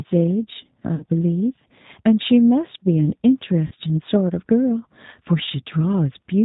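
From start to finish the speech carries G.729 codec damage. The sound is rebuilt from a vocal-tract filter and a few pulses per frame, which fits an 8 kbit/s codec. It is plainly rough and synthetic, and a spectrogram shows nothing above 4 kHz.

VoIP packet loss concealed by the speech codec strikes at 0.95–1.04 s (about 50 ms lost) and again at 3.67–3.74 s (about 40 ms). The decoder repeated its last pitch and filter at falling gain. Each gap sounds like a brief, fading stretch of the last sound. The waveform shows a shrinking periodic stretch, and the spectrogram shows smeared, static harmonics.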